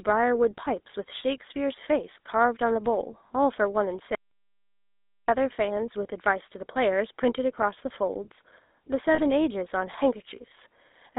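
The whole clip of speech carries the GSM full-rate codec sound. The band runs from 250 Hz to 3.7 kHz. The voice has a buzzy, gravelly roughness from pulse-driven vocal-tract modelling. The coarseness is plainly audible and fits a 13 kbps full-rate link.

At 3.28 to 3.31 s come lost GSM frames. About 20 ms of audio is missing, which fits one dropped frame. The decoder repeats the last good frame. The result is a brief, rough, metallic ring.

From 4.15 to 5.28 s there is an audio dropout to silence. The sound cuts off mid-flow and returns abruptly. The gap lasts about 1.1 s. It is silent with no room tone. The likely cause is a lost input, with silence written meanwhile.

At 9.14 to 9.21 s more lost GSM frames occur. About 40 ms is concealed, which points to two frames in a row. The held, metallic ring is longer here.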